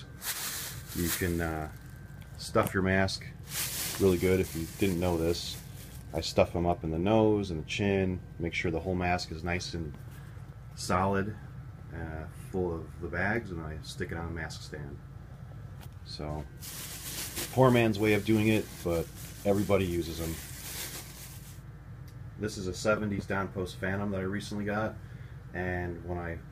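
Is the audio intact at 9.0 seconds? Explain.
Yes, the audio at 9.0 seconds is intact, with no fault affecting that moment.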